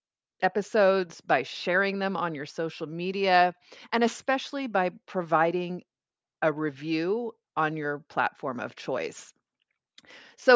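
No dropouts, glitches, clipping or other technical faults turn up anywhere in the recording.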